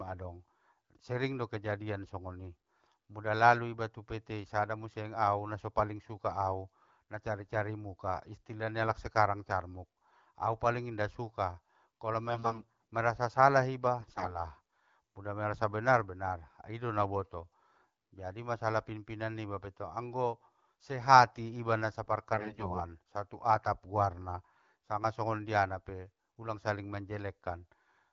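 AMR bit errors hit this AMR-WB speech at 12.65 kbit/s three times. Weakly protected frame bits arrive flipped while the check on core bits still passes, so excitation pulses land wrongly and fine pitch, gain and spectral values drift. At 12.30–12.82 s, after "paling inda suka kolo", and 13.99–14.39 s, after "merasa salah", about a tenth of bits flip; at 22.33–22.80 s, after "sehati iba na sa", nearer 15 percent. Pitch and level hold, but the sound turns hoarse, scratchy and gargly.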